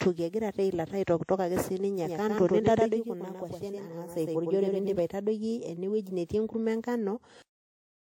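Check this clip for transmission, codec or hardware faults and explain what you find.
Two faults stand out in this speech recording, one lasting the whole clip and one confined to its middle.

Transcoding between lossy codecs runs throughout. The sound likely passed through MP3 at 63 kbit/s and then WMA 1 at 64 kbit/s, so the second encoder spent bits re-encoding the first one's artefacts. The artefacts of both codecs are heard together, and nothing remains above 16.6 kHz.

A doubled audio track runs from 2.05 s to 4.99 s, beginning just before "aitadoiki ne wueji netii". A second copy, likely from an edit or a slower capture path, trails the original by roughly a tenth of a second at about 5 dB lower. It sounds full-band and dry, with no room colour, and it cuts in and out abruptly.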